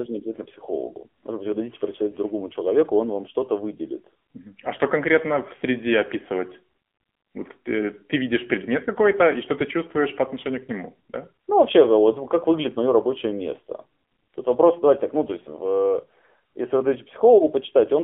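Throughout, the speech shows AMR narrowband mobile codec damage: the sound is confined to 200 Hz–3.4 kHz, with buzzy, synthetic voicing that plain band-limiting lacks, consistent with a 7.4 kbps mode.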